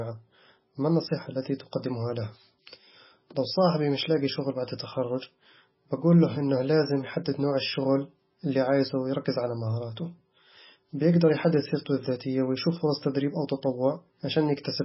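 From start to finish the speech has a hard treble ceiling, with nothing above 5.6 kHz, and a watery, swirling texture, which points to heavy MP3 compression as the likely cause. Starved of bits, the encoder discards the top band outright and zeroes weaker frequency lines that then flicker on and off between frames. The damage is severe enough to fit a very low bitrate of around 16 kbps, leaving sibilants dull and chirpy and attacks smeared.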